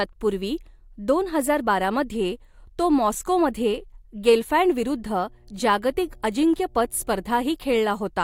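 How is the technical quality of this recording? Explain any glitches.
The one real problem is mains hum, which comes in at 4.82 s and stays until 7.56 s. It's a steady low drone at 60 Hz sitting well under the speech, somewhere around 35 dB down. That's the power line leaking into the signal path, typically through a ground loop or a transformer sitting close to the cabling, and it shows up as a constant tone rather than anything that moves with the talker.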